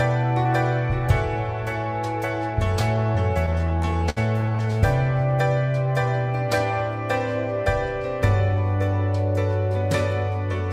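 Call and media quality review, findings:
Repeated stalls (stutter), 3.46–4.84 s. Jitter buffer keeps running dry from late packets. Last sound held over many short gaps, 340 ms total, longest 67 ms. Nothing lost. Audio drags.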